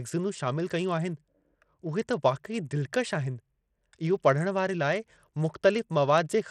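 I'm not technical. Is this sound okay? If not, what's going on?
No. Throughout the speech there's Bluetooth SBC compression damage, likely from a wireless link squeezing the signal, so the treble drops out and a gritty roughness rides on the sound.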